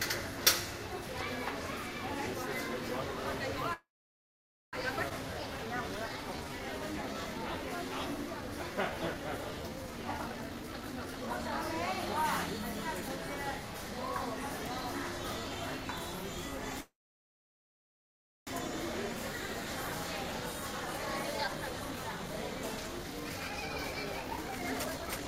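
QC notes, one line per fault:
3.73–4.76 s, call audio freeze: the sound stops and a brief fading tail gives way to about 0.89 s of silence, a gap of roughly 1 s in all. This likely comes from delayed packets draining the jitter buffer. Playback then resumes where it halted, with nothing lost.
5.09 s, skip ahead: playback jumps forward across a join of only about 14 ms, dropping roughly 0.7 s of sound. A stretch of audio was dropped in transit or by an overflowing buffer while later audio was already waiting, so both sides are spliced almost directly.
5.27–10.05 s, jitter buffer slow-down: the sound runs at 88% speed at unchanged pitch, stretched by 585 ms as short pitch periods and pauses are repeated over and over to rebuild a depleted buffer, giving drawn-out sounds.
10.13–13.17 s, jitter buffer speed-up: the sound runs at 131% speed without a pitch change, roughly a second trimmed away in many small cuts as the buffer sheds excess delay, so it comes across hurried and compressed.
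16.80–18.50 s, call audio freeze: a short fading fill collapses into about 1.56 s of silence, about 1.7 s added overall, likely from packets stalling in transit and starving the buffer. The sound picks up again from the same point, nothing skipped.
19.87 s to the end, jitter buffer speed-up: playback runs at 124% speed, same pitch, with roughly 1.5 s removed through repeated tiny excisions as the receiver works off excess buffered delay, leaving the sound rushed.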